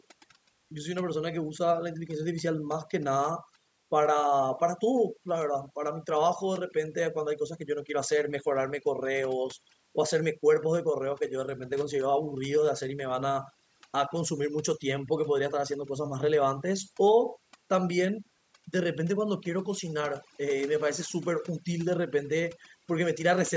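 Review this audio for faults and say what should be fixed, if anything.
Mains hum runs throughout: a steady 60 Hz tone, roughly 20 dB below the speech, from a ground loop or nearby transformer leaking power-line current into the signal. Prevent it by breaking the ground loop with a single common ground or isolation transformer and routing cables away from power supplies.

Overdone noise removal, also throughout: set too aggressively, it mutes frequency bands near its noise estimate, leaving twinkling specks in near-silent gaps. Prevent it by recording in a quieter setting and applying noise reduction gently, with a modest reduction amount.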